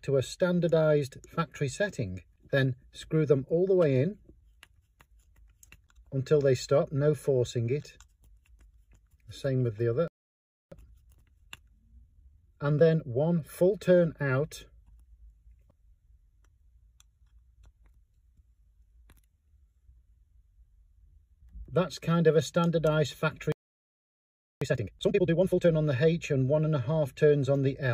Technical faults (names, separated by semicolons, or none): playback stall; time-compressed catch-up